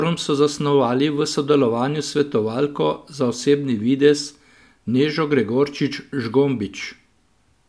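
No technical fault can be heard anywhere in this speech recording; the signal holds steady and continuous for its whole duration.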